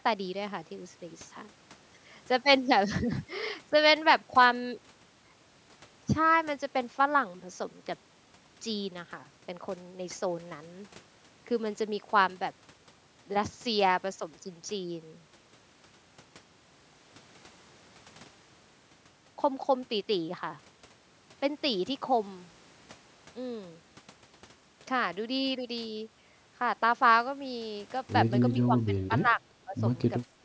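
Speech, and right near the end it gets chopped: from 28.61 to 29.45 s the level keeps dipping, by about 15 dB at worst and for around half a second in total, and there's another short dip from 29.65 to 29.77 s. That pattern is most likely speech suppressed in double talk, where the echo canceller hears both sides at once, can't tell the talker from loudspeaker echo, and pulls the near-end voice down along with it. The call microphone processing is audible too, with nothing above 8 kHz.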